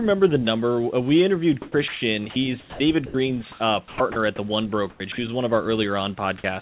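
From 1.62 to 2.02 s, comfort noise replaces the background. The pause's real room noise gives way to a smooth, steady hiss, likely synthesised at the receiver while the sender stopped transmitting. On a spectrogram the textured background turns to an even, featureless band that fills the area below the 4 kHz ceiling of the telephone-band call path. Inside that stretch, from 1.88 to 2.02 s, the voice detector drops sound: about 90 ms of speech is lost to the same flat noise. The waveform shows speech collapsing abruptly into a low, uniform fill.

From 2.3 to 2.8 s the detector chops the sound, likely switching transmission off and on repeatedly. The sound has several holes, about 260 ms in all. The spectrogram shows speech energy broken into fragments with smooth noise patches between them. At 3.06 to 3.14 s another drop removes about 80 ms of speech, leaving a short flat notch in the envelope. 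At 3.52 to 3.6 s comfort noise briefly stands in for background that sits about 31 dB below the loud parts, and the level shifts by about 3 dB, visible as a small step in the noise floor.

Chopping returns at 3.88 to 4.16 s and 4.9 to 5.18 s, each with about 160 ms replaced. Syllables cut in and out, and the waveform shows ragged gaps filled with even hiss. A final drop at 6.38 to 6.44 s takes about 40 ms of the speech, a brief cut to flat noise.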